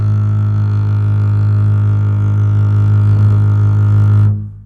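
No technical faults can be heard anywhere in the music.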